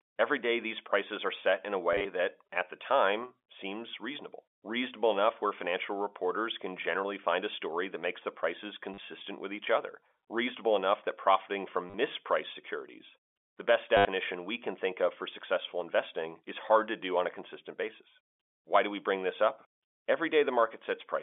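Packet loss with last packet repeated first appears between "are set in a" and "that at the time", from 1.93 to 2.05 s, where 90 ms goes missing in short bursts. It recurs from 8.94 to 8.98 s after "that makes the prices", from 11.90 to 11.94 s after "reasonable enough that profiting", and from 13.97 to 14.05 s. Each gap is filled by replaying the last received chunk of the G.711 telephone line. The result is a robotic stutter with a buzz near 100 Hz, which fits 10 ms packets. Zero-filled loss would drop to brief silences instead.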